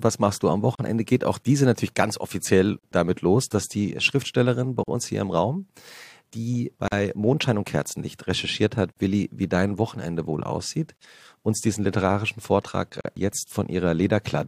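A gap at a join of encoded pieces opens at 0.75, 2.79, 4.84 (before "uns hier im"), 6.88, 8.92, 10.97 (between "wohl aussieht" and "uns diesen literarischen") and 13.01 s. Each is a silence of about 40 to 43 ms with smeared edges. The gaps come from encoder start delay and end padding left untrimmed when the pieces were joined. Unlike random dropouts, they recur about every 2.0 s, and the sound always resumes where it stopped.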